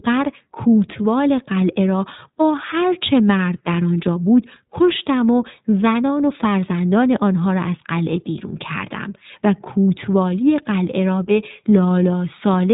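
Throughout, the speech carries iLBC codec damage. Nothing passes above 3.8 kHz, so it sounds narrowband. Independently coded frames leave it rough and synthetic, which fits 15.2 kbps with 20 ms frames.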